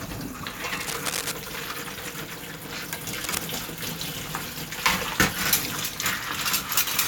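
From 0.71 to 1.32 s, and again from 3.13 to 3.38 s, cable scratch noise sits only a few dB below the sound: dense, uneven crackling bursts. The likely cause is a worn cable or connector being moved, its contact resistance fluctuating rapidly.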